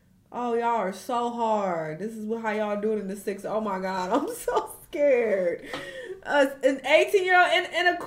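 A single loud pop cuts through the audio from 4.59 to 4.61 s, peaking roughly 5 dB above the surrounding level while the sound continues underneath. The likely cause is a brief voltage pulse, from a plug, switch, static discharge or driver glitch, entering the signal path.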